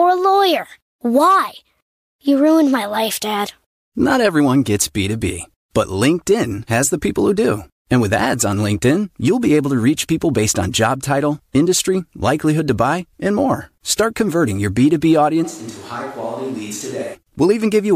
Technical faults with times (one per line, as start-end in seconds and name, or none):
15.46-17.13 switch to a distant microphone